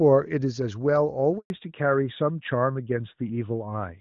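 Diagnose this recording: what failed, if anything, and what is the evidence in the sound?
The fault sits in the network. At 1.38 s the speech fades out within a few tens of milliseconds. Silence follows until 1.5 s, a gap of 120 ms. This is a handover gap. The call was passed from one network link to another, and no speech frames arrived while the switch happened. The decoder had nothing to play, so it faded out. Whatever was said in that stretch is gone.

The second fault is in the codec. From 1.5 s to the end, nothing above 4 kHz remains. Before the gap, the HD Voice sound is clean, which fits AMR-WB at its top rate. After it, the speech turns duller and rougher. This is a fallback to narrowband. The call dropped from HD Voice to AMR-NB, which fits its 12.2 kbit/s mode. That codec cannot code anything above the old telephone band.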